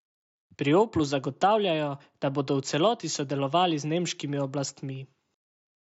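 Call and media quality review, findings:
No faults found.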